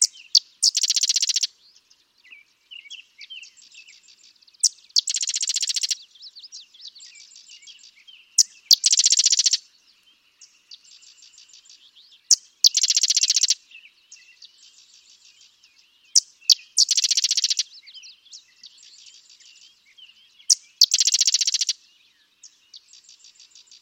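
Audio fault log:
0.35–0.37 s, 4.65 s, 8.39–9.06 s, 12.31–12.67 s, 16.16–16.83 s and 20.51–20.84 s, hard clipping: peaks overran the stage's limit by up to about 5 dB, leaving flat tops that add high harmonics. The abrupt, bright crackle, rather than a rounded warm thickening, separates it from soft saturation.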